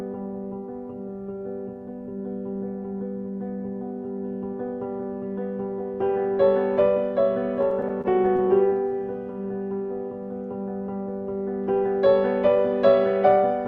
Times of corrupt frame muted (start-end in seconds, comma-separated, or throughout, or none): none